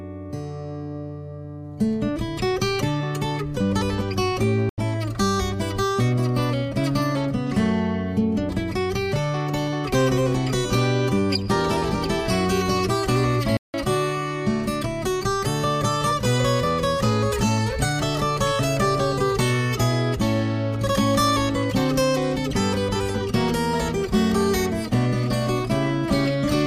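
At 4.69 s the audio drops to a block of digital silence lasting 85 ms, ending at 4.78 s. At 13.57 s a second one lasts 171 ms, to 13.74 s. Both lengths fit missed output buffers of 4096 and 8192 samples. Each cuts out and back with no fade around a short hole.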